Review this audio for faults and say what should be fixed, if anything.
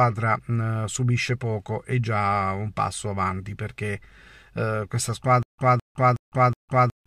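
From 5.43 s to the end, the speech breaks into a stutter with silent gaps. A 212 ms fragment repeats four times. Each repeat is followed by about 156 ms of digital silence, giving a steady 368 ms cycle. The likely cause is a stalled stream replaying its last buffer. The intended audio is lost. Keep the playback buffer fed, with enough headroom and proper underrun recovery.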